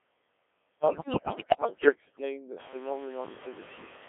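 Noise suppressor artifacts run from start to finish. The suppressor pulls down every band it judges to be steady noise, by about 20 dB. So the background drops away in the gaps and comes back under the speech. The room noise is audible through this. Near 2.5 s it rises by about 17 dB and then sits about 15 dB below the speech.

The Codec 2 vocoder also shapes the whole clip. The band is limited to 300 Hz to 3.5 kHz. The decoder does not keep the waveform. It rebuilds the voice from pitch, voicing, energy and a rough spectral envelope, using sine waves. Here the damage is heavy. The speech is robotic and buzzy throughout. The coarse texture points to a very low rate, near 1.3 kbit/s.

Bit errors on digital voice radio strike from 0.88 to 1.92 s. Roughly one bit in five arrives flipped. In a vocoder this lean, each bit steers a whole frame's pitch, level, voicing or spectrum. So single errors become audible jumps. 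Pitch leaps, loudness lurches, and the tone colour shifts. The speech dissolves into bleeps, warbles and robotic gibberish for about a second. The damage is spread over 25 frames.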